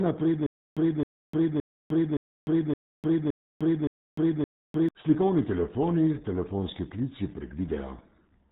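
From start to finish the speech carries the RealAudio 14.4 codec's signature: nothing above 3.8 kHz survives, and the heavy coding damage leaves it muffled and gargly, which fits RealAudio 1 running at about 8 kbit/s for dial-up delivery.

From 0.46 s to 4.89 s there is a stutter with silent gaps. A 266 ms fragment plays eight times, each followed by 302 ms of digital silence, repeating every 568 ms. This is likely a stalled stream replaying its last buffer before running empty, so the intervening audio is lost.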